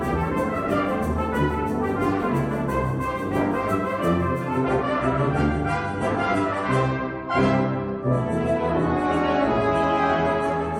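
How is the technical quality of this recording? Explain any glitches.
The technical quality is reduced in the second half by a drop in stream quality. From 4.57 s to the end, the audio plays as an adaptive stream at a lower bitrate. The player switched to a leaner version, likely because the connection slowed. The change is sudden, with no gap. Nothing is heard above about 11.4 kHz, so the treble sounds dull. Codec artefacts become more audible. The sound points to a shift from about 128 kbit/s MP3 down to roughly 48 kbit/s.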